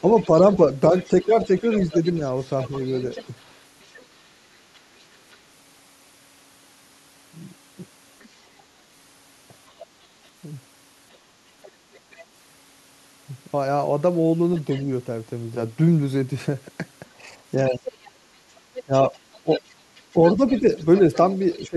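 Speech recording with the other side's voice leaking through in five places: 0.0 to 5.36 s, 8.2 to 8.26 s, 11.63 to 12.24 s, 14.56 to 14.82 s and 17.67 to 21.63 s. It's quietest in the middle bits and loudest near the end, where it sits only about 15 dB under the talker. That's most likely the talker's loudspeaker getting back into the mic with the echo canceller not fully removing it. You also get speech suppressed in double talk while that leak overlaps the talker. From 0.01 to 3.33 s it's a mild dip of a few dB, adding up to about a third of a second. From 17.7 s to the end it cuts much deeper, around 20 dB, for about half a second in total. Here the canceller probably couldn't separate the talker from the echo, so it pulled both down.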